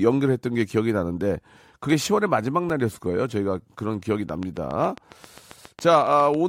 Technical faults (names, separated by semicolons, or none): block of digital silence; train of clicks